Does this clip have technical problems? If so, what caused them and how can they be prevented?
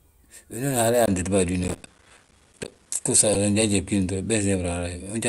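Yes. At 1.06 s a 20 ms dropout gives way to duller audio with nothing above 11.4 kHz, a level shift of about 5 dB and a noise floor about 40 dB down, likely an input switched to a poorer device. Lock the input device in the recording settings before starting.

From 1.64 to 2.86 s a gritty processor overload crackle of tiny silent gaps tears through the speech, fitting missed deadlines on buffers of roughly 5 ms. Use larger buffers and close competing processes.

At 3.33 s a brief noisy blip peaking near -10 dBFS marks a corrupt frame decoded, about two damaged frames played anyway. Add error checking so damaged frames are concealed rather than decoded.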